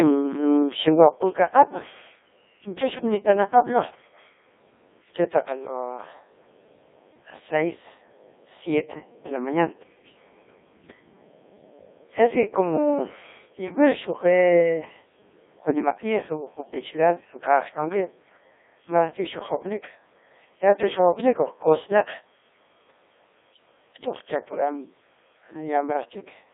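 From start to finish the speech sounds robotic and buzzy, thin and boxed into a narrow band from roughly 300 Hz to 3.6 kHz, with heavy codec damage. This is the Codec 2 vocoder at work. Only pitch, voicing, energy and a coarse spectral envelope survive transmission, and the decoder rebuilds the voice from sine waves rather than the original waveform. The heavy degradation points to a very low-rate mode of about 1.6 kbit/s.

Between 16.56 and 16.74 s the voice suddenly lurches into a short burst of warbling, bleepy gibberish, jumping in pitch, loudness and tone colour. These are bit errors on digital voice radio. Around one bit in twenty arrived flipped, and at such a low rate each wrong bit misdirects a whole frame's pitch, level, voicing or spectrum. The length fits roughly three corrupted frames.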